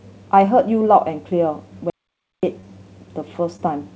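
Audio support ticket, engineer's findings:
Audio dropout to silence, 1.90 to 2.43 s: speech cuts off mid-flow and returns abruptly after about 0.53 s. The gap is silent with no room tone, most likely a lost input or stray mute while the encoder kept writing. Waveform shows a flat line. The spectrogram shows a fully black band.

Short concealed packet loss, 2.60 to 2.65 s and 3.57 to 3.60 s: brief smear or wobble where about 20 ms of audio missed the decoder. The jitter buffer extrapolated the preceding sound and cross-faded back. On the spectrogram, harmonics or noise are stretched flat for about 20 ms. On the waveform, a repeated cycle or slight envelope step. Call path band-limited, nothing above 8 kHz, consistent with G.722 at 64 kbps.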